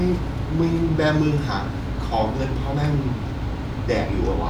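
A short bit of recorded speech, and there's nothing technically wrong to point to anywhere in it.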